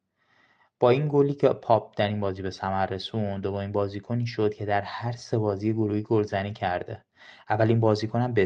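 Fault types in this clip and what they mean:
Lost packet rebuilt from error correction: at 2.25–2.27 s, 3.33–3.39 s and 6.73 s, a low-bitrate copy carried in the next Opus packet replaced the missing audio, so there is no gap, only brief rougher, noisier patches. The 40 ms patch reflects two lost packets.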